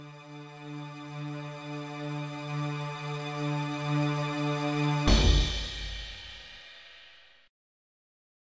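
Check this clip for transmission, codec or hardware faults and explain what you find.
No transmission, codec or hardware faults were found here.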